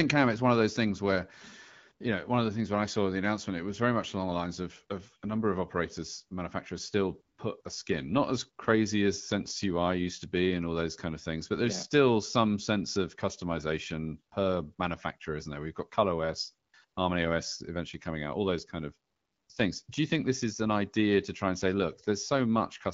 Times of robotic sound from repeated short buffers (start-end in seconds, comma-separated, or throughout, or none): none